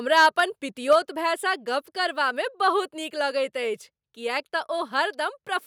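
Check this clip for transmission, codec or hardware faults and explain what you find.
Two faults occur, both in the first second of the speech.

Microphone overload, 0.16–0.40 s and 0.91–0.96 s: the microphone input gain is likely set too high, so peaks overshoot the converter's ceiling by about 5 dB and then about 3 dB. A few percent of samples have their tops sheared flat, giving the loudest syllables a harsh, crackling edge.

Microphone volume stepped down, at 0.93 s: during the second clipped peak, the call software likely responds to the overload by lowering the device's input gain in a single step of about 3 dB. Voice and background both drop abruptly in level at that instant.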